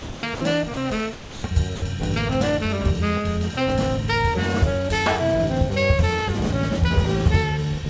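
The audio, carried over a G.722 call path with nothing above 8 kHz, drops out five times at 0 to 0.23 s, 0.35 to 0.41 s, 0.74 to 0.77 s, 1.13 to 1.43 s and 1.76 to 1.82 s. Each gap is filled with steady, smooth noise, likely sound dropped by the voice detector and replaced with comfort noise. That even hiss, rather than clicks or repeated fragments, separates it from packet-loss dropouts.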